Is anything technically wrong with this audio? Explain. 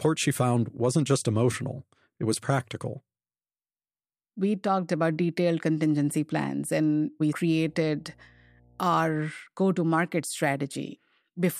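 Yes. From 7.49 to 9.2 s, between "contingency plans and we" and "go to market", there is mains hum: a steady low tone at 60 Hz sitting roughly 35 dB below the speech. Power-line current leaks into the signal path, typically through a ground loop or a nearby transformer. Unlike wind or handling rumble, which shifts and surges, this tone holds one fixed pitch and level.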